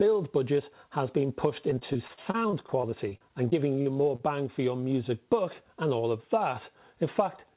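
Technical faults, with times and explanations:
1.7–4.21 s, repeated packet loss (robotic sound): packets keep going missing through this stretch, leaving a string of short holes, the longest around 40 ms. Each hole gets patched by stretching out the last bit of sound, so roughly 15% of the span is filler. With one patch landing right after another, it turns choppy, with small pieces missing. The narrowband call path, with nothing above 4 kHz, makes it sound thinner still.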